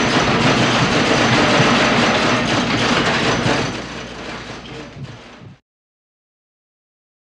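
Nothing is technically wrong with this audio.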